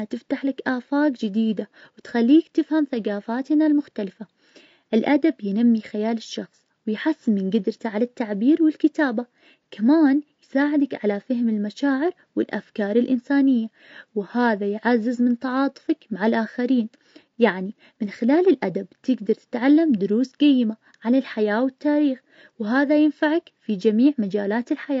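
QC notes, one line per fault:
throughout: low-delay AAC compression, likely, makes the speech rough and grainy. Its very short frames resolve pitch harmonics poorly, filling the gaps between them with noise. Unlike steady background hiss, this noise moves with the speech, and the plainly audible damage fits roughly 32 kbps.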